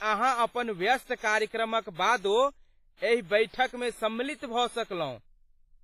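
From start to finish the speech carries heavy coding damage, most likely WMA compression at a low bitrate, roughly in the 24 kbps range by the sound of it. Each syllable leaves a smeared, ringing tail as quantisation noise spreads over long transform blocks, and a washy hiss swells and fades with the voice. Weak spectral detail has been stripped out, and nothing survives above 15.5 kHz, so the top end stops dead.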